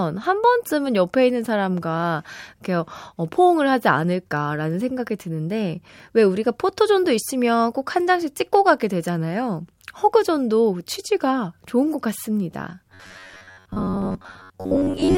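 From 12.90 s to 15.17 s the speech turns into robotic sound from repeated short buffers: a stiff, metallic buzz pitched at 93.8 Hz that only loosely tracks the words. The likely cause is audio arriving too slowly, so a fragment of about 10.7 ms is looped to fill most of the gap, roughly seven-tenths of the time. A spectrogram shows rigid horizontal harmonics spaced 93.8 Hz apart, and the waveform repeats near-identical cycles.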